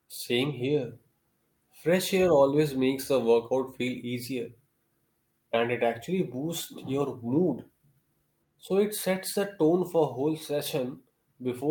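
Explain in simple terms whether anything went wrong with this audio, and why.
Nothing went wrong with this audio; the speech comes through without any fault to point to.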